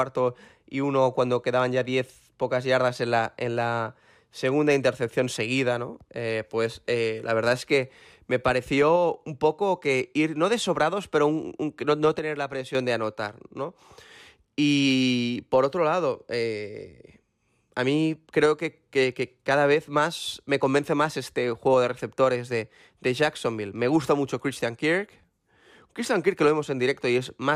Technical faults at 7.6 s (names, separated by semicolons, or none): none